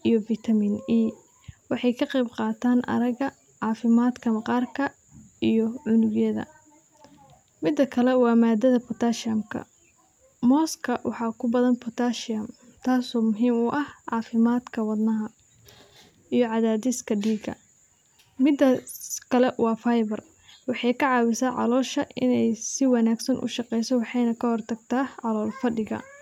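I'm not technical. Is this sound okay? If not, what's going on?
No, there's one small glitch. At 4.10 seconds you'll hear a single sharp click in the speech. It's most likely dropped samples: a handful of audio points, roughly a tenth of a millisecond, went missing, so the sound jumps abruptly and snaps.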